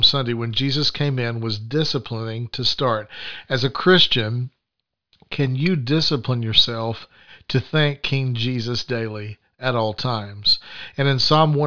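Nothing in the speech recording stood out as a technical fault on listening.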